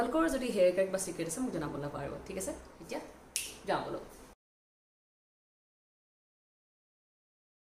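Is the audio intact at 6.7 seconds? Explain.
Yes, the audio is intact at 6.7 seconds, with no fault present at that moment.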